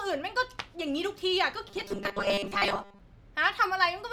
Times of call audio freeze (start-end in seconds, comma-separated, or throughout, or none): none